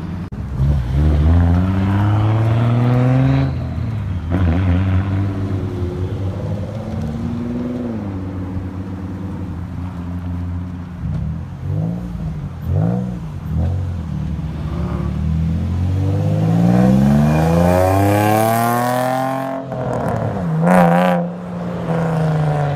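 No technical faults are audible anywhere in the recording.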